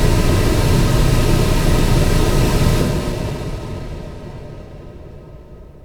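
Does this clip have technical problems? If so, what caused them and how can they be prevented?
Yes. At 2.81 s there is a skip ahead: about a second of audio was discarded while later audio was already queued, so playback jumps forward with no filler. On a waveform the two sides butt together abruptly, and a spectrogram shows an unnatural vertical seam. Keeping the jitter buffer from overflowing, and trimming gradually rather than dropping whole stretches, prevents this.

From 2.91 to 3.95 s there is a jitter buffer speed-up. The receiver, holding more audio than its target, cut short pitch-period-sized pieces repeatedly, removing roughly a tenth of a second. Playback runs at 110% speed without a change in pitch. A spectrogram shows events slightly compressed in time with their frequency bands unchanged. Tuning buffer targets and smoothing network delivery prevents the backlog that triggers this.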